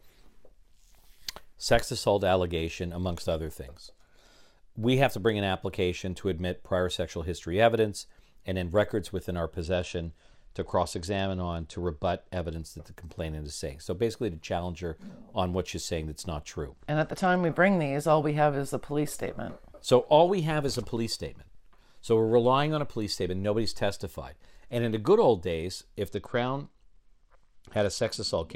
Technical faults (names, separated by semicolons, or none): Bluetooth SBC bit pool drop